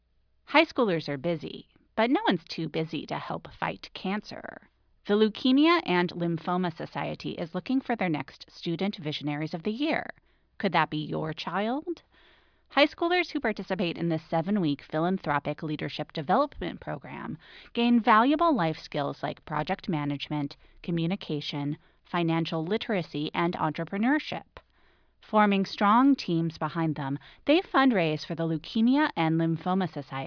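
Speech recording with no technical faults detected.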